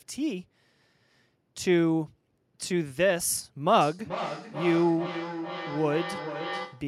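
From 3.81 s to the end, feedback echo between two devices. Speech returns roughly every 400 ms, thinner and ringing, peaking about 10 dB below the speech.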